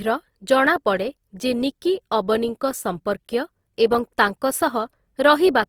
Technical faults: Opus compression

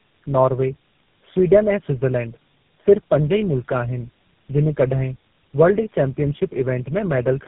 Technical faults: tandem speech coding

